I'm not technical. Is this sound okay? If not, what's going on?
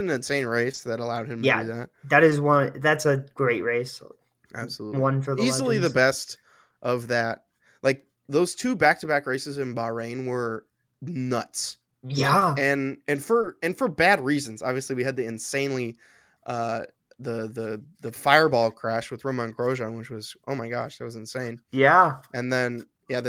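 No. There is short concealed packet loss: tiny bits of the call arrived too late, and the receiver papered over each gap by stretching the sound just before it. It shows up as brief smears or wobbles at 0.71 and 0.75 s (just before "that allowed him yeah"), 2.29 s, 12.39 s, and 13.41 s (between "and and" and "and for bad reasons"). Unlike a hard dropout, the sound never goes silent. It blurs for an instant.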